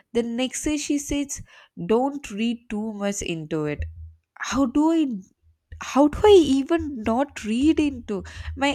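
No technical faults are audible anywhere in the recording.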